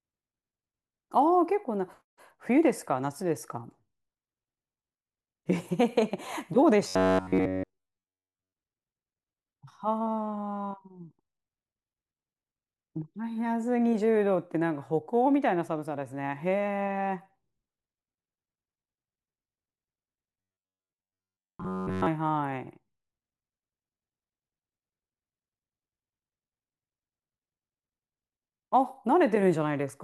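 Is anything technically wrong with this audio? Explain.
Yes. From 6.88 to 8.53 s and again from 20.41 to 22.06 s, the speech collapses into a rigid, metallic buzz near 93.8 Hz that only loosely tracks the words. This robotic sound from repeated short buffers likely comes from audio arriving too seldom, so essentially all of each stretch is filled by looping a roughly 10.7 ms fragment.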